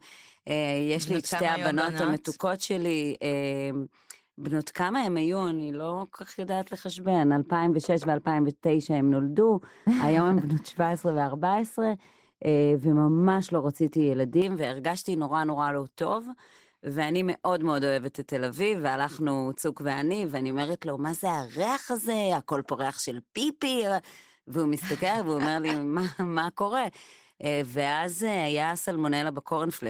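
Across the whole clip the speech has passed through Opus voice compression running in hybrid mode, with SILK linear prediction handling the lower band and a CELT layer covering content above 8 kHz. The excitation is coded coarsely, which fits a bitrate around 16 kbps. The codec damage is plainly audible: the speech comes out muffled and hoarse, with a slightly robotic edge.

From 7.06 s to 14.42 s, a de-emphasis treble cut was applied wrongly, either to audio that carried no pre-emphasis or a second time. The result is a smooth downward slope toward the top of the spectrum, about 11 dB lower at 10 kHz than at 1 kHz. For those seven seconds the speech turns noticeably duller and more muffled, as if heard through a cloth, then brightens again when the section ends.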